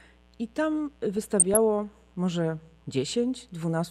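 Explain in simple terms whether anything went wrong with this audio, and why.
A mains buzz runs through the whole clip: sharp electrical spikes tied to 60 Hz power make a raspy, fizzy buzz rather than a smooth, low hum.

From 1.17 to 1.57 s there is DAB burbling. Weak digital radio reception corrupted the audio, giving short blips of noise in parts of the sound rather than silent gaps or single clicks.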